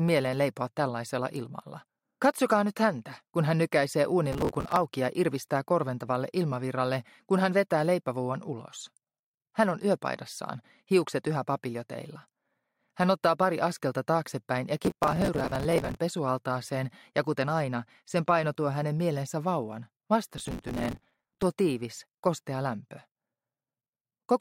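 Processor overload crackle appears three times: 4.32 to 4.77 s, 14.84 to 15.98 s and 20.34 to 21.43 s. The processor misses deadline after deadline for buffers of around 5 ms, from a few dozen misses in the first burst to around a hundred in the last. Each miss replays stale audio with hard edges, so a gritty tearing rides on the sound. The waveform shows jagged discontinuities, and the spectrogram shows dense vertical broadband streaks.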